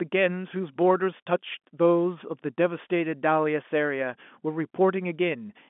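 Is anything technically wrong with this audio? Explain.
No, nothing is technically wrong.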